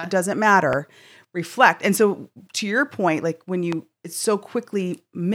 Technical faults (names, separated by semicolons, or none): loud pop